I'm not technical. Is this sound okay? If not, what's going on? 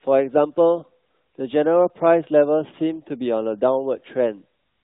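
Yes, nothing in this speech recording stands out as a fault. It has the slightly muffled, phone-call quality of the AMR narrowband mobile codec, which carries nothing above 4 kHz, and its coding marks here are light.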